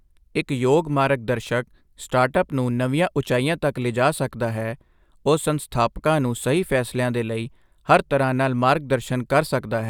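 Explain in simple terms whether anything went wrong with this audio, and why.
Nothing went wrong with this audio that a listener can hear.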